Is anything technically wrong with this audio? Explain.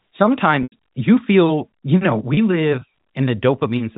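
Yes. There are two dropouts from packet loss with pitch repetition. The first runs from 0.63 to 0.72 s, just before "you feel you know". The second runs from 2.34 to 2.37 s, just after "you feel you know". The receiver bridged each gap by repeating the last pitch period and fading it. The 90 ms gap outlasts that fade, so it dips towards silence before a brief cross-fade back. The 30 ms gap sounds like a short, buzzy hold. Both fit 30 ms packets. The G.711 telephone band is audible throughout.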